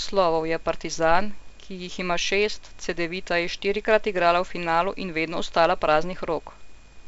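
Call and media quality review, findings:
No faults found.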